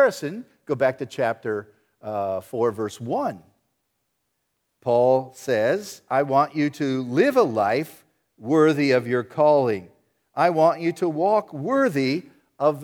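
No technical faults can be heard anywhere in the speech.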